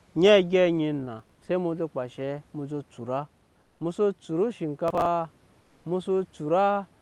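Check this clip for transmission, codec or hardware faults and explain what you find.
Two kinds of fault turn up: processor overload crackle twice and comfort noise in place of the background twice.

Processor overload crackle, 1.20 to 1.42 s and 4.88 to 5.06 s: the processor falls behind and skips a run of short buffers, consistent with roughly 10 ms blocks and around fifteen missed in each burst. The hard-edged gaps pile up into a gritty, tearing crackle over the speech that stops once the load eases.

Comfort noise in place of the background, 3.61 to 3.79 s (180 ms) and 5.60 to 5.84 s (240 ms): during these pauses, the likely cause is discontinuous transmission, with the receiver substituting synthetic noise. The real room background, about 41 and 38 dB below the loud speech, gives way to a flat, featureless hiss, about 3 dB and 2 dB quieter respectively, within the call's roughly 12 kHz audio bandwidth.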